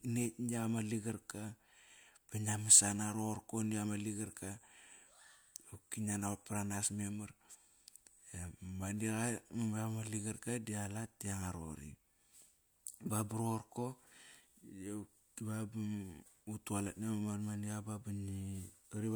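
Nothing in the recording stood out as a technical problem on listening.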